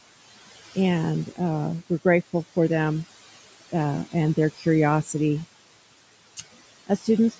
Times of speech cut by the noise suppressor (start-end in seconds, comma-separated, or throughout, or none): 4.57-4.66